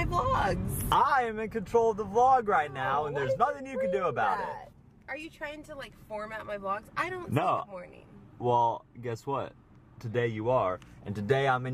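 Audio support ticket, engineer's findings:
Call bitrate drop, 2.03–3.33 s: coarser encoding, consistent with roughly 64 to 24 kbps. Spectrogram shows the upper band thinning, then restoring as the bitrate recovers.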